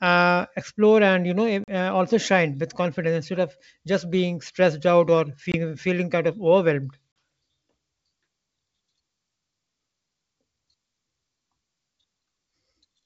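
Packet loss on an ADPCM call leaves hard-edged silent holes at 1.64, 5.52 and 7.12 s, lasting 40, 20 and 40 ms. The decoder's predictor and step size drift from the sender's. Speech returns with brief, slight distortion.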